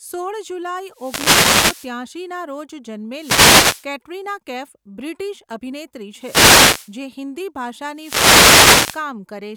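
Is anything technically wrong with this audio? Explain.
Yes. The speech is broken four times by a wireless microphone noise hit: 0.90–1.99 s, 3.13–3.89 s (ending just before "કેટરિના કૈફ બ્રિટિશ અભિનેત્રી"), 6.15–6.95 s (right after that same phrase), and 7.94–9.08 s. Each time the FM radio link fades as reflected paths cancel, so receiver noise rises as a swish of static. A spectrogram shows broadband hiss patches. The waveform shows a thickened noise floor.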